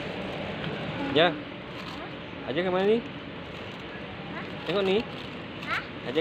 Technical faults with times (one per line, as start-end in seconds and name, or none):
none